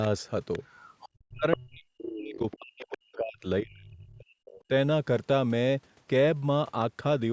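A faint second voice drifts under the speech from 0.53 to 1.09 s, likely the other side's voice leaking through because the echo canceller left residual loudspeaker sound in the microphone. From 1.29 to 3.45 s and again from 3.61 to 4.38 s, the speech sinks deeply, likely speech suppressed in double talk as the canceller turned down both voices while they overlapped. Within that first stretch, short scraps of the other side's voice leak through more plainly at 1.52 to 1.57 s, 2.13 to 2.18 s and 2.35 to 2.55 s. A last faint trace returns from 4.46 to 4.60 s.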